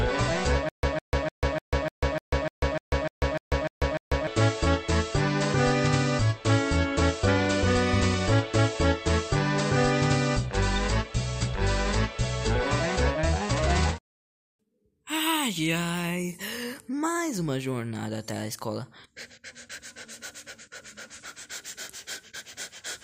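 From 0.69 to 4.27 s the same 155 ms burst of sound repeats twelve times, each followed by about 144 ms of dead digital silence, a steady stutter roughly every 0.3 s. This stutter with silent gaps likely comes from a stalled stream replaying its last fragment at each retry, losing the audio meant for that stretch.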